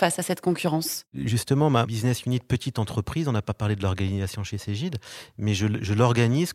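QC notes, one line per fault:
Nothing to flag here, as no faults turn up anywhere in the recording.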